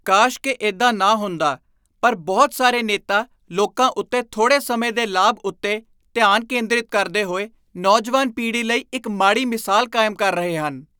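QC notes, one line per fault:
No faults found.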